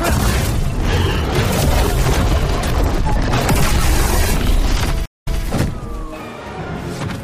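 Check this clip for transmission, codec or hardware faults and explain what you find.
One transmission fault, a stream reconnect, occurs between 5.06 and 5.42 s. The connection drops, leaving 155 ms of silence, then a fresh decoder resumes about 0.21 s earlier, repeating that stretch. The waveform shows a flat gap, then a quiet fade-in; the spectrogram shows a blank vertical band.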